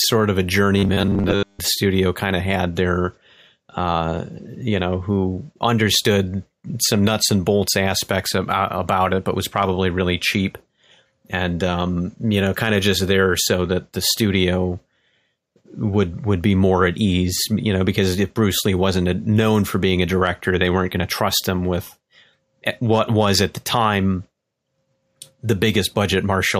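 Robotic sound from repeated short buffers appears from 0.78 to 1.59 s in this speech clip, starting right after "of a" and clearing before "studio kind of had". For most of that stretch the voice collapses into a rigid, metallic buzz pitched at 100 Hz that only loosely tracks the speech. The likely cause is fresh audio arriving too seldom, so playback keeps looping the last 10 ms or so, one cycle of that buzz, while the real audio is skipped.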